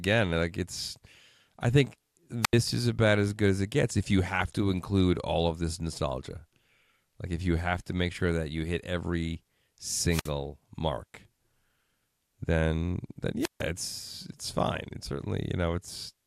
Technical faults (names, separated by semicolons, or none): wireless microphone squelch dropout; DAB burbling